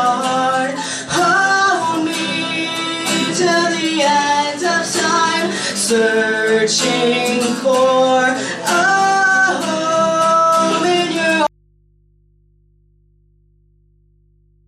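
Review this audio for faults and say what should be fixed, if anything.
Audio dropout to a faint residue from 11.47 s to the end: the signal cuts abruptly, leaving only mains hum about 40 dB down, likely a lost source feed. Secure and monitor input connections so a break is caught before recording continues.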